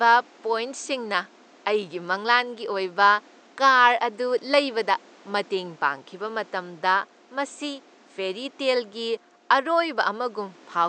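Listening through this speech recording, nothing stood out as a technical problem, with only the room's own background noise audible about 30 dB below the speech.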